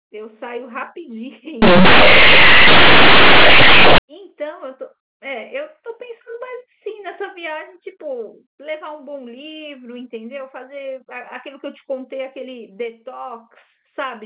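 From 1.62 to 3.98 s, companded audio is read as linear. The mu-law bytes of the G.711 telephone stream play as plain 8-bit samples, with no expansion. Quiet sounds jump to the size of loud ones. The speech turns loud, harsh and buzzy, with heavy noise in the gaps.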